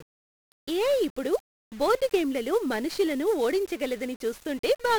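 The speech has been squeezed through 1-bit DFPWM compression for the whole clip, and the damage is heavy. Each sample has been reduced to a single up-or-down step that nudges an adaptive level toward the signal, which fits a DFPWM stream at 48 kbps. That coarse tracking leaves dense broadband quantisation noise riding on everything, so the speech comes out fuzzy and crackly, with its upper frequencies swamped by a constant hiss.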